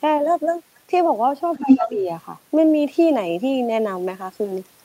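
A short speech recording with two problems in the same moment. From 1.54 to 1.88 s, the other side's voice leaks through. It is somewhat louder than the talker. The likely cause is a loudspeaker echo the echo canceller failed to remove. Overlapping this, from 1.59 to 2.08 s, the talker's speech is suppressed in double talk. The voice dips by up to about 10 dB, for roughly 0.4 s in total. Both sides were likely talking, so the canceller turned everything down.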